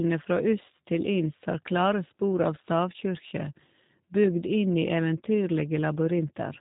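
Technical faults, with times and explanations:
Throughout, G.729 codec: the speech has been squeezed through a low-rate VoIP coder that stores only a vocal tract filter, a pitch predictor and a few pulses per short frame, then rebuilds the sound from them. Everything above 4 kHz is missing, so the speech sounds muffled and boxy, and the rebuilt excitation gives it a plainly audible rough, synthetic edge. The damage fits the 8 kbit/s G.729A variant.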